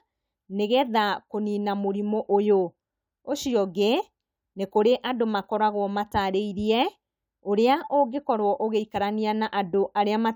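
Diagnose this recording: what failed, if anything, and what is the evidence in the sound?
Nothing failed, and the sound gives no evidence of a fault at any stage of this recording.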